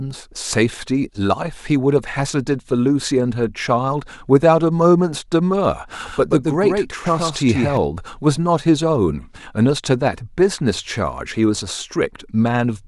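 From 5.93 s to 7.77 s the speech carries a doubled audio track: a second, full-band copy sits roughly 150 ms behind the original, a few decibels quieter, with no decay or room colour on it. It switches in and out abruptly at those edges. This is likely the same signal reaching the mix twice, once through a slower path, producing a clean, distinct slap rather than a natural echo.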